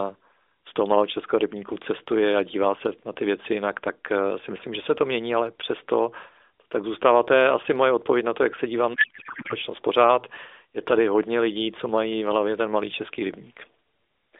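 From 8.94 to 9.54 s, just after "to jak se dívám", a codec payload misread turns the speech into garbled warble: octet-aligned AMR frames decoded as bandwidth-efficient, scrambling every field.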